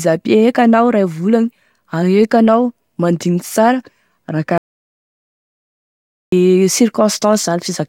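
At 4.58 s the speech cuts off abruptly and the track falls into dead digital silence, with no room tone or hiss underneath, until the sound returns mid-flow at 6.32 s. This is an audio dropout to silence lasting about 1.75 s, and whatever was spoken in that stretch is simply gone. The likely cause is a brief loss of the input signal, such as a disconnected device, a failed link or an accidental mute, while the recorder kept writing zeros.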